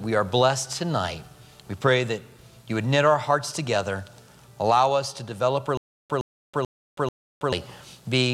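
Stutter with silent gaps, 5.77–7.52 s: a 113 ms burst returns four times between 324 ms silences, likely a stalled stream replaying its last fragment.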